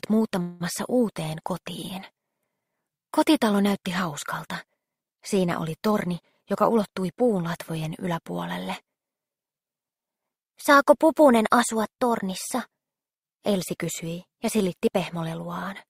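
At 0.41 s a call audio freeze holds the sound until 0.62 s: the last sound carries on as a fading buzz for about 190 ms, likely from delayed packets draining the jitter buffer. Nothing is lost and it never drops to silence, unlike a dropout.

From 5.91 to 7.59 s a jitter buffer speed-up runs the audio at 111% while the pitch stays put, so it sounds hurried rather than chipmunk-like. Roughly a fifth of a second is trimmed in many tiny pitch-period cuts, not one audible skip.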